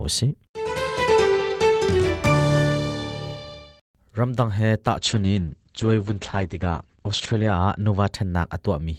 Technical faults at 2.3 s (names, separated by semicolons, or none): none